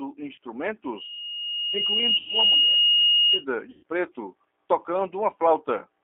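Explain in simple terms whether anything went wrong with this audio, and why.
Two things went wrong. The first lasts the whole clip: the speech went through the G.729 codec, a low-rate phone codec. It doesn't store the sound itself. It rebuilds the voice from a rough model of the throat and mouth plus a few pulses per tiny slice of time. Only the band from about 300 Hz to 3.5 kHz comes through. So the speech sounds thin, muffled and a little rough and robotic. The damage is easy to hear.

The second problem is VoIP packet loss concealed by the speech codec. This happens three times. At 0.36 to 0.38 s, about 20 ms of sound went missing. At 2.17 to 2.28 s, about 100 ms was lost. At 3.71 to 3.83 s, about 120 ms was lost. When a packet doesn't arrive, the decoder fills the gap by repeating its last guess and letting it fade. That gives a brief buzzy or smeared patch. The two longer gaps fit several packets lost in a row. 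The voice can also sound weak for a moment just after each one.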